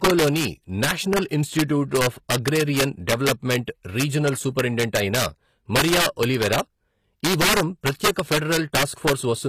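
Throughout the speech, integer overflow: a gain stage was driven about 8 dB past the integer limit, and instead of being held there, around one percent of samples wrap to the opposite sign. Each such peak jumps across the full range, giving cracks on loud moments that are sharper than clipping.

Also throughout, the treble is plainly damaged. Its upper harmonics do not line up with the lower spectrum, s sounds come out gritty or lispy, and nothing remains above 14.9 kHz. The likely cause is HE-AAC compression, which keeps only the lower spectrum and rebuilds the top by copying lower bands upward under a coarse envelope. The damage fits a low bitrate near 24 kbps.

Pre-echo appears from 1.27 to 1.31 s, a 35 ms spread just before "ఇన్స్టిట్యూట్ ఆఫ్ అగ్రేరియన్", and again from 8.12 to 8.16 s, 40 ms just after "ఈ వారం". In both, the transform codec spread quantisation noise across its block, so a short hiss fills the quiet moment before an attack, leaving that attack smeared.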